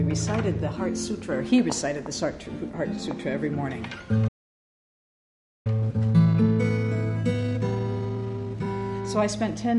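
At 4.28 s the audio cuts to silence for about 1.37 s, until 5.67 s, a playback stall likely caused by the player running out of buffered data. From 5.67 to 8.67 s, time-compressed catch-up plays the backlog at 1.25 times speed by splicing out short segments, sounding hurried at normal pitch.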